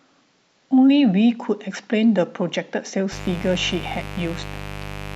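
From 3.12 s to the end of the speech clip, a mains buzz sets in: a steady, raspy tone built on 50 Hz harmonics reaching into the kilohertz range, sitting roughly 15 dB below the voice. Sharp switching spikes from a dimmer, rectifier or unshielded run are leaking into the signal path.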